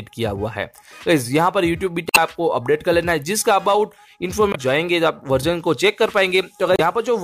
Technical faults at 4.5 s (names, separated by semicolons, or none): damaged data in a compressed stream